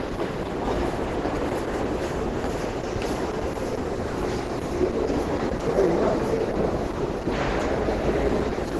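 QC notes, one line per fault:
Throughout: Opus compression, likely from an encoder starved at a very low rate, consistent with around 12 kbps, that has dropped out of its music mode into the hybrid speech mode. With too few bits to code detail, it discards everything above 12 kHz and rebuilds much of the remaining band from coarse approximations. The sound is heavily degraded: dull and muffled at the top, with a hoarse, rough graininess replacing clean tonal and transient detail.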